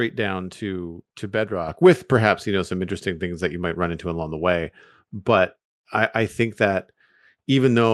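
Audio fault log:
1.68 s, microphone volume stepped up: right after "down to to" and before "with perhaps you know", the whole level jumps by about 6 dB in a single step. The speech and the room tone behind it rise together, which shows the change happened at the input rather than in the source. This points to call software judging the microphone too quiet and raising the device's capture volume mid-sentence.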